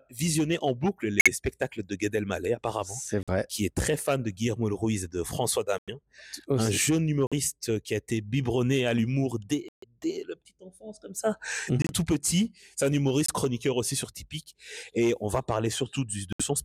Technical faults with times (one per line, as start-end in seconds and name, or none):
1.20-1.28 corrupt frame muted
3.23-3.29 corrupt frame muted
5.78-5.89 corrupt frame muted
7.27-7.33 corrupt frame muted
9.68-9.85 corrupt frame muted
11.82-11.91 corrupt frame muted
13.26-13.30 corrupt frame muted
16.33-16.41 corrupt frame muted